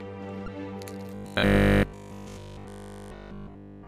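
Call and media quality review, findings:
Damaged data in a compressed stream at 0.45 to 0.48 s. A brief glitch as the decoder loses frame sync and resyncs.

Robotic sound from repeated short buffers, 1.15 to 3.87 s. A rigid metallic buzz at 50 Hz through the whole stretch. Likely a 20 ms chunk replayed while fresh audio arrives too seldom.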